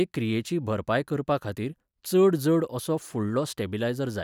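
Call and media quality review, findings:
CD scratch ticks, 3.02 to 3.69 s in speech. Six regular clicks, roughly 7 per second, the longest about 1.5 ms. Source disc damage. Each rotation crosses a blemish beyond error correction, so the player interpolates or mutes a few samples.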